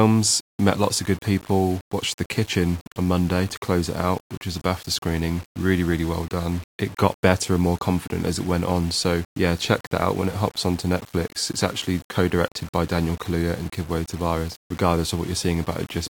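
The speech was likely reduced to about 7 bits by rounding, with no dither. Throughout the clip, the error tracks the signal as grainy distortion around 25 dB below it, making quiet passages gritty and letting the faintest sounds sputter or drop out.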